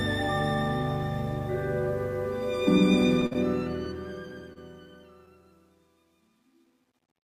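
From 3.06 s to the end of the clip, the fade-out that begins around 3 s passes through a gain stage that keeps too few bits and adds no dither, so truncation distortion on a fade sets in. As the level drops toward the smallest step the waveform collapses into coarse square steps, and the grain points to roughly an 11-bit path. The tail turns gritty, and it is at its worst from 4.62 s.

Over the same stretch, packets arrive late and the jitter buffer runs dry three times, giving a short stall from a late packet. The receiver holds the last sound until the data turns up, then resumes where it left off, so nothing is lost. The first hold, from 3.26 to 3.33 s, lasts 50 ms and runs straight into a second of 15 ms ending at 3.37 s. A third, of 27 ms, comes at 4.53 s. Each is heard as a briefly frozen sustain.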